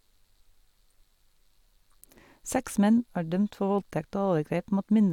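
No technical faults can be heard anywhere in the speech, and the signal stays continuous and stable throughout.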